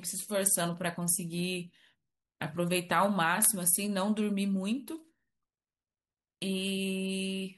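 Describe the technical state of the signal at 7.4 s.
At 7.4 s the speech signal is intact, with no audible fault at that moment.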